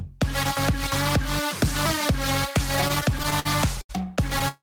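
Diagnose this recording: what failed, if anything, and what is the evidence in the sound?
From 2.81 to 3.91 s the sound drags and hiccups: eleven brief holds, the longest 79 ms, together about 216 ms or a fifth of that span. These are repeated stalls (stutter) at the network stage: packets arrived late, the jitter buffer kept running dry, and the receiver stretched the last sound each time. Nothing is lost, only delayed.

At 4.48 s the sound sticks and holds as a continued buzz or hiss for 144 ms, running to the end without dropping to silence. This is likely a call audio freeze in the network path: held-up packets emptied the jitter buffer, so the receiver extended the final sound, adding 144 ms of delay.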